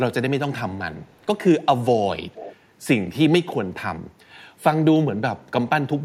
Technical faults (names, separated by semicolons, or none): echo leak